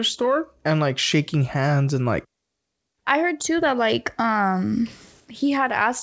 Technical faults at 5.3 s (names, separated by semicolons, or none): none